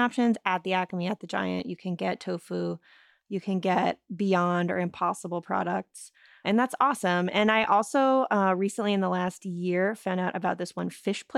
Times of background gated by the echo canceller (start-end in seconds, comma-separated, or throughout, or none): none